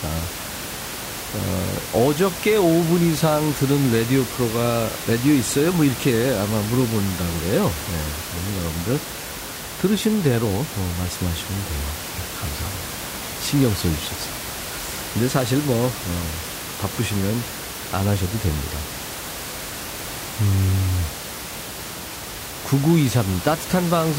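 Listening through the speech, nothing stood out apart from the room's own background noise, which sits about 10 dB below the voice.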